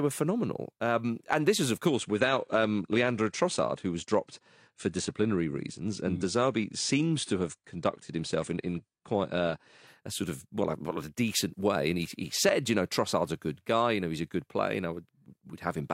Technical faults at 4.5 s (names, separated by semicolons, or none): adaptive stream at a lower bitrate